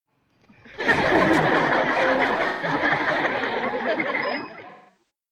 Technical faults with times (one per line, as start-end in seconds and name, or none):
2.48-2.68 AAC frame loss with concealment
4.70-5.03 AAC frame loss with concealment